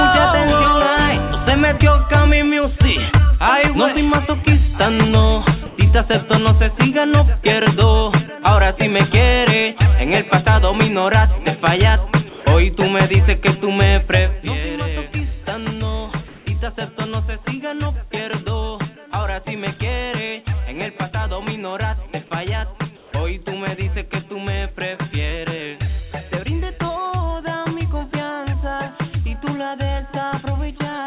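Comfort noise in place of the background at 5.66, 12.29, 16.28 and 22.97 s: for 0.12 to 0.18 s each, the real background becomes a flat, featureless hiss, shifting level by about 2, 3, 2 and 4 dB. The likely cause is discontinuous transmission pausing and the receiver substituting synthetic noise.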